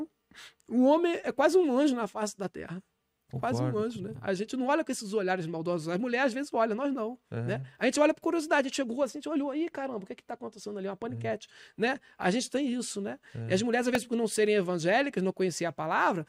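At 13.95 s there is a repeated buffer. New audio arrived late, so the device replayed its last tiny block several times. Each repeat lasts about 1.33 ms, which fits a 64-sample buffer. The hard joins make a brief click or buzz.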